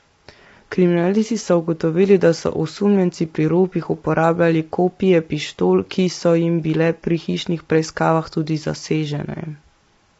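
Speech clip, and the whole way through it sounds rough and grainy, with noise filling in between the harmonics and nothing above 7.8 kHz. That's most likely low-delay AAC compression. Its short frames smear pitch detail, and the damage fits AAC-ELD running at around 24 kbps.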